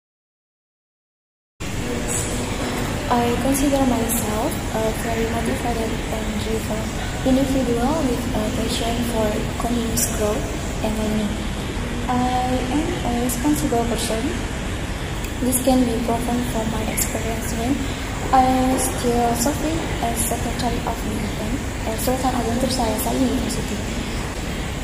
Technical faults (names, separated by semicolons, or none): adaptive stream at a lower bitrate